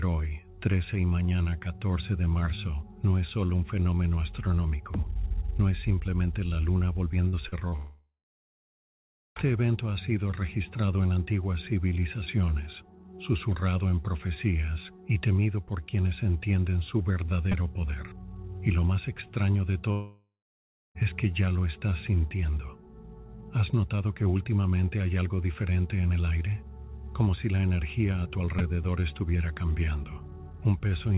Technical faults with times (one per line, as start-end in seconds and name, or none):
7.28-7.36 burst of packet loss
7.49-7.75 short concealed packet loss
7.76-9.39 long network dropout
17.52 repeated buffer
19.92-20.98 long network dropout
28.59 repeated buffer